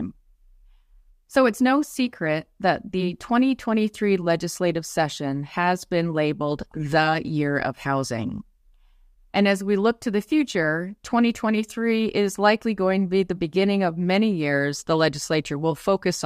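No technical faults can be heard in this recording.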